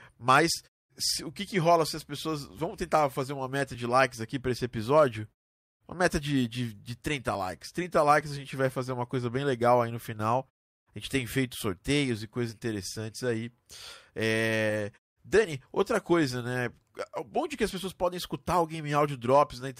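Nothing in this speech recording stands out as a technical fault, so there's nothing to flag here.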